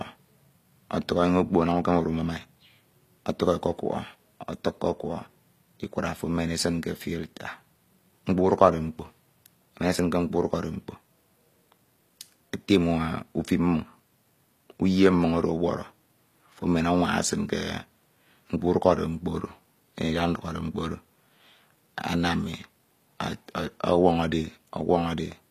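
From start to finish, the s sounds come out gritty and lispy, and the upper treble has a bright but synthetic, metallic sheen, with nothing at all above 14.9 kHz. The likely cause is HE-AAC compression at a low bitrate, the damage plainly audible, which fits roughly 24 kbps: only the lower spectrum is truly coded, and the top is rebuilt by copying lower bands upward, so its harmonics no longer match the speech beneath.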